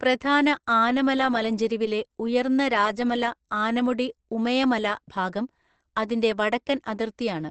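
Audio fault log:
Throughout: Opus compression. The speech sounds muffled and hoarse, with sibilants that lack air, because the audio has likely been squeezed through Opus at a low rate in its speech-oriented mode, which models the voice rather than preserving its fine detail. Nothing survives above about 8.7 kHz, so a spectrogram shows a flat ceiling with empty space above it.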